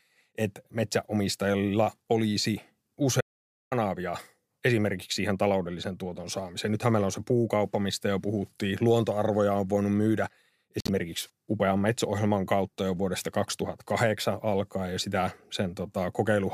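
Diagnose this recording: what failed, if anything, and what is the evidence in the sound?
At the capture stage, an audio dropout to silence runs from 3.21 to 3.72 s, about half a second of pure silence with no room tone. A natural pause would keep background noise, so this points to lost input, likely a link or device interruption.

In the codec, corrupt frames were decoded at two points. There is a short error at 7.91–7.94 s, between "meillä on se puukauppa" and "jo puhuttiin", and a longer one at 10.79–10.90 s, after "on voinut myydä". Misplaced spectral energy, spanning a couple to a few frames, distinguishes these from clicks or dropouts.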